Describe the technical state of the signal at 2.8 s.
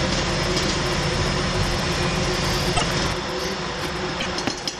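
From 2.76 to 2.83 s the audio skips ahead and garbles for about 70 ms, roughly three 26 ms frames, likely a broken MP3 bit reservoir. Unlike a clean dropout, the damage spills past the cut because later frames pull stale bytes.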